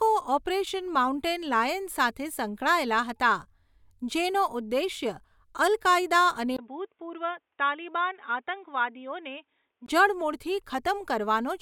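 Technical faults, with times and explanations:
6.57–9.88 s, input switched to a poorer device: the recording likely jumped to a narrower-band input, such as a headset's call profile, after a 20 ms gap. The speech turns dull and boxy with nothing above 3.8 kHz, drops about 5 dB, gains a faint new noise floor, then clears.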